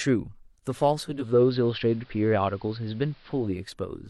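At 0.98 s the speech undergoes a digital radio blend to analogue. The receiver lost its digital stream and cross-faded over about 0.46 s to the AM broadcast of the same station, staying there until 3.76 s. During that span the treble is cut back, so sibilants and consonant detail turn dull, and a steady hiss sits roughly 35 dB under the signal. Loudness holds constant across both transitions.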